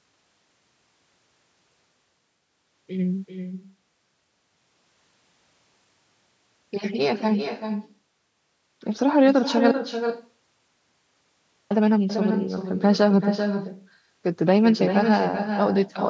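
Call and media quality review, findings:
Echo with no canceller, whole clip: speech repeats about 7 dB down, roughly 0.4 s late, thin. Far-end loudspeaker pickup, not reverb: a distinct delayed copy, no smeared tail.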